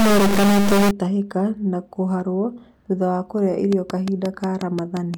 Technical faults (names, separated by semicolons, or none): stuck bit; train of clicks